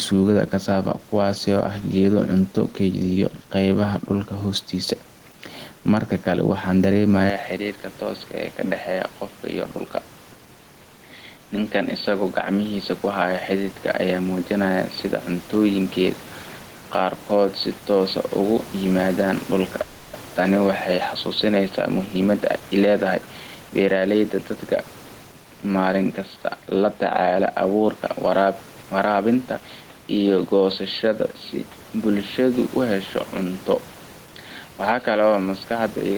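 Throughout the clip, gain pumping is audible, with a gain swing of roughly 10 dB; the room noise sits about 29 dB under the speech. This points to gain set far too high, with a fast limiter likely clamping it.

At 7.30 s the input switched to a poorer device, likely a different microphone or a headset call profile. There is no gap at the change, but the sound becomes dull and boxy with nothing above 4.5 kHz, the level drops by about 10 dB, and a new noise floor appears around 35 dB below the speech. Tone, level and noise all change at the same instant and stay that way to the end, which a momentary codec glitch would not do.

From 19.81 to 20.15 s a call audio freeze stretches the last sound for 320 ms, likely because delayed packets emptied the jitter buffer. The speech then resumes exactly where it stopped. Nothing is lost, unlike a dropout, which cuts material out.

From 21.99 to 24.65 s a jitter buffer speed-up makes the speech run at 111% of normal speed, with about 300 ms removed in small pitch-period slices. 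The pitch stays the same, which separates it from a sample-rate mismatch. Trimming the excess delay leaves the speech sounding hurried.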